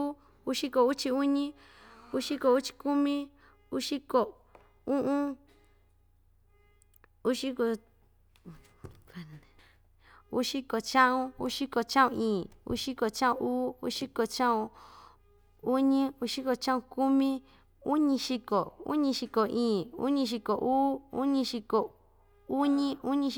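From 12.30 to 12.71 s, CD scratch ticks: three brief clicks where a disc blemish beat error correction, showing as thin vertical spectrogram spikes.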